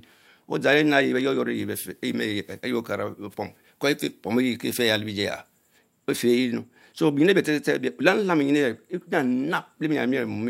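Speech with pre-emphasis left on from 1.55 to 5.78 s: a treble boost matching the CD 50/15 µs curve was applied but never undone, lifting 10 kHz by about 8 dB relative to 1 kHz, so that stretch sounds thin, bright and sharply sibilant.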